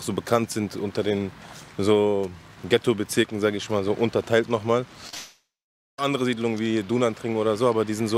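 Two brief packet losses hit the stream, at 5.07 s and from 5.09 to 5.14 s. The receiver covered roughly 10 ms and then 30 ms of missing data by extending the preceding sound, which blurs into a short smear.

A likely long network dropout follows from 5.15 to 5.99 s, with about 0.84 s never delivered. The concealed tail fades out, leaving around half a second of silence before the audio returns without the lost stretch.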